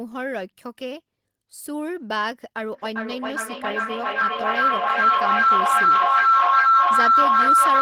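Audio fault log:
2.72–7.81 s feedback howl: a microphone-to-loudspeaker loop gains level on each pass, so repeats swell, recurring roughly every 0.4 s, and narrow to a tone around 1.5 kHz, peaking about 12 dB over the speech. Unlike echo, the repeats grow rather than fade.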